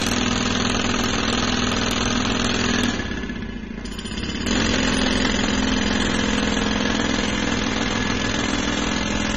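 From start to finish the sound is dull, with nothing above 13.5 kHz and plainly audible codec damage, most likely from AAC compression (AAC-LC), at a level that fits a bitrate around 24 kbps. To save bits, the encoder dropped the top of the spectrum and coarsely quantised what remained. On a spectrogram this appears as a hard, flat ceiling at 13.5 kHz across the whole clip, with empty space above it.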